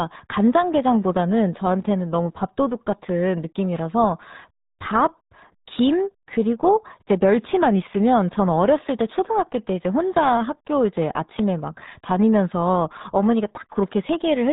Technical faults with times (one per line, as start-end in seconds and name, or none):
0.00-14.53 RealAudio 14.4 codec